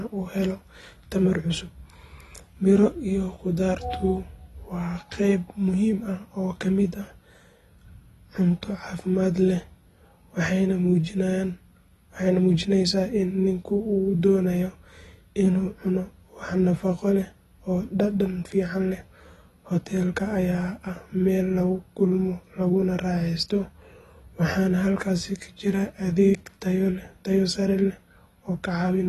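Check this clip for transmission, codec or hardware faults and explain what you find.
There is one fault, present for the whole recording: AAC compression. The speech has likely been through AAC-LC at a low bitrate, which fits roughly 32 kbps. Starved of bits, the encoder discards everything above 12.1 kHz and coarsely quantises what remains. The result is plainly audible: the voice sounds dull and smeared, and sibilants have a fizzy, warbling texture.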